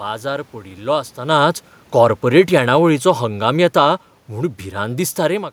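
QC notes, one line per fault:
1.17–5.48 s, automatic gain falling: just after "बाजार पडिल्लो" the speech starts loud, then sinks steadily by about 7 dB, and the room noise drops with it. The automatic gain control judged the input too loud or its background noise too strong and eased its gain down over those four seconds.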